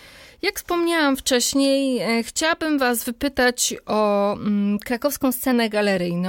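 After "wypytać o mm", from 4.77 to 5.53 s the speech runs 6.4% fast and 108 cents sharp, snapping back, likely a drift correction step.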